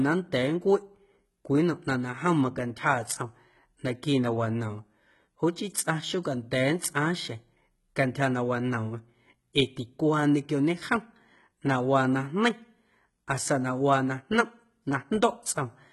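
Across the whole speech clip the treble reaches high, yet s sounds come out gritty and metallic, with nothing at all above 11.8 kHz. This is likely HE-AAC compression with heavy damage, which fits a bitrate around 16 kbps. The upper band is rebuilt by copying lower bands upward under a coarse envelope, so its harmonics don't line up with those below. A plain low-pass or narrowband codec would instead sound dull and muffled.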